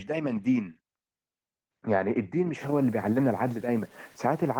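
From 2.61 s to the end at 4.60 s, the speech turns grainy and rough. The grit rises and falls with the speech itself, so it is not a steady hiss. Quiet stretches sound the harshest, and the softest parts sputter or drop out. The likely cause is low bit depth without dither, with the signal truncated to about 7 bits. That leaves rounding error roughly 30 dB below the speech, tied to the waveform rather than spread evenly as noise.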